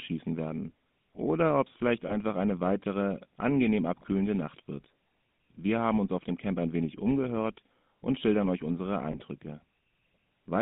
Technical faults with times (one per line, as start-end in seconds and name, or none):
0.00-10.61 GSM full-rate codec
2.08-2.13 lost GSM frames
9.12-9.16 lost GSM frames